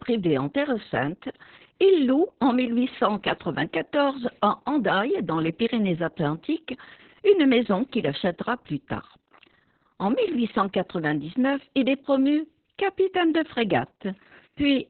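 Opus voice compression runs throughout: the SILK coder at about 6 kbps keeps nothing above 4.3 kHz and codes coarsely, leaving the speech muffled, hoarse and slightly robotic.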